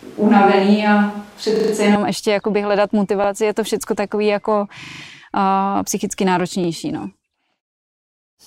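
From the start until 1.95 s, the close microphone's signal is missing, and the recording most likely falls back to a distant microphone. The speech sounds roomy and hollow, with thinner bass, and background noise sits roughly 30 dB below it. The level barely changes. The sound snaps back to close and dry just before "ještě jakoby hledat".

Repeated buffers follow whenever fresh audio arrives late and the device replays its last 40 ms block, with a hard join at each repeat. From 1.56 to 1.72 s one block plays four extra times, giving a quick rattling stutter. From 3.24 to 3.28 s, between "ještě jakoby hledat" and "je to všechno takový", a single repeat is heard as a brief hitch. From 4.84 to 5.0 s, right after "to všechno takový jako", another stutter with four extra plays follows. A final single repeat falls at 6.64 to 6.68 s.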